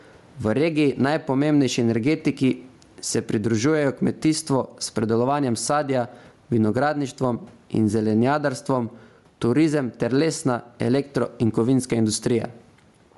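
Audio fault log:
Throughout, gain pumping: the level keeps swinging by roughly 15 dB, so quiet and loud passages end up squashed close together. This is likely an input gain set far too high with a fast limiter clamping down on each peak. On a waveform the envelope looks flattened, with the noise floor bulging in the gaps. The room noise sits about 43 dB below the speech.
Throughout, Bluetooth LC3 compression: the speech has a plainly audible breathy, grainy edge, and nothing is present above about 11.6 kHz. This is likely LC3 coding at around 48 kbps with 10 ms frames. Much of the upper band has been zeroed and replaced with shaped noise. On a spectrogram there is a hard ceiling near 11.6 kHz, with speckled, noise-like texture in place of clean harmonics in the upper bands.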